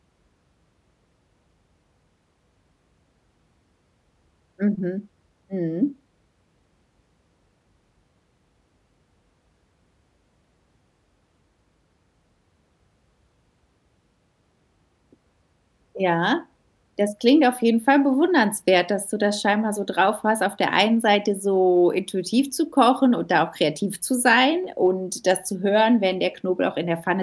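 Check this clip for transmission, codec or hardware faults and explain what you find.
No faults detected.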